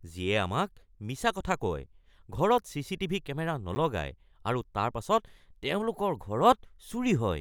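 A speech recording with one sharp tick at 3.75 s, a block of digital silence about 10 ms long. The signal drops abruptly to silence and returns with no fade, and the gap is too short to hear as a pause.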